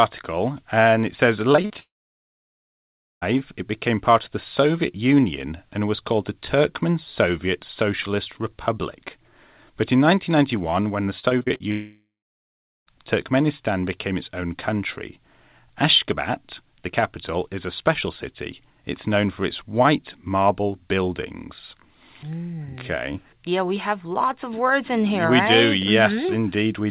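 Repeated packet loss (robotic sound) appears at 1.52 to 1.72 s, right after "and it says", with four short holes. It returns at 11.19 to 11.62 s with seven holes of up to about 40 ms. Each hole is patched by stretching the previous sound, so about half of the first stretch and about two fifths of the second turn choppy.

A long network dropout follows each burst, at 1.80 to 3.24 s before "it became part of" and at 11.71 to 12.88 s. A brief fading buzz or hiss gives way to about 1.3 s and 0.8 s of silence respectively. The likely cause is audio that never arrived, so the sound resumes with that part gone.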